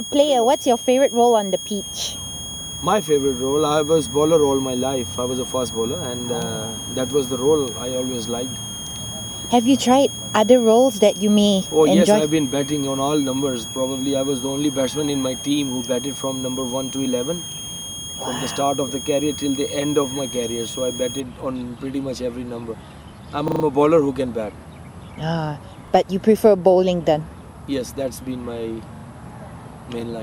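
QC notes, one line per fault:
0.0–21.2 s: switching supply whistle. A high whistle near 3 kHz, drifting between about 3.2 and 3.3 kHz, sits roughly 10 dB under the audio. That wandering pitch points to a power supply in audible burst mode, unlike a fixed-frequency electrical tone.
17.52–17.56 s, 23.48–23.64 s, 25.88–25.92 s, 28.96–29.04 s: repeated buffer. A 40 ms chunk replays one, four, one and two extra times, giving stutters with hard joins. This fits a 40 ms buffer replayed when new audio arrived late. Unlike a dropout, nothing goes silent.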